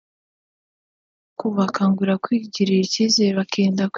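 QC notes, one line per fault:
No faults found, so there are no QC notes to list.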